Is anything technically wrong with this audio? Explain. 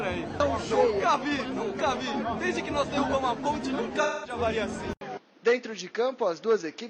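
Yes, two problems. From 4.02 to 4.39 s there's AAC frame loss with concealment. Roughly 213 ms went missing, which fits about five lost frames. The decoder papered over the gap by reusing its last good spectrum, so that stretch turns smeared and noisy and loses its clean texture.

At 4.93 s the sound drops out for about 80 ms, then carries on to the end duller. Nothing comes through above 6.9 kHz, the level sits roughly 5 dB lower, and a new noise floor appears around 30 dB down. That's likely the input switched to a poorer device mid-recording.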